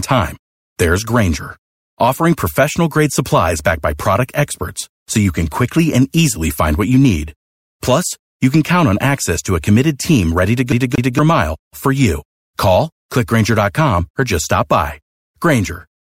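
At 10.72 s the speech catches and stutters: a fragment of about 0.23 s plays twice in quick succession, each pass separated by a brief drop to silence, before normal playback returns at 11.19 s. This is a CD stuck on one turn, where a scratch knocks the laser back a track at the same point on the disc. The same slice of audio repeats at an even rate, giving the familiar skipping-disc jitter.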